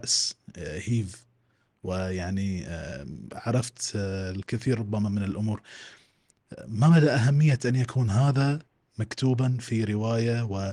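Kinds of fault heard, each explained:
No audible faults in this speech recording.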